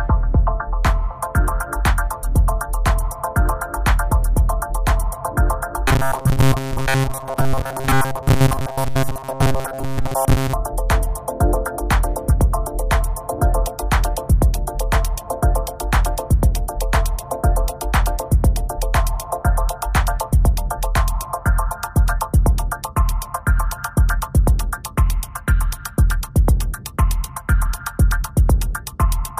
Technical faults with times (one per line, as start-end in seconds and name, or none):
5.88-10.53 robotic sound from repeated short buffers